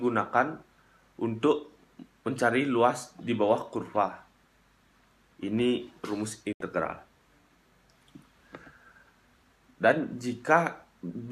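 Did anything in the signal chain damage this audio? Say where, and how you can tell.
Yes. A digital broadcast dropout at 6.53 to 6.61 s, at the receiver's decoding stage. The audio fades out within about 3 ms, stays silent for 72 ms, then resumes. Frames arrived corrupt or missing, so the receiver muted. The gap fits about three lost frames.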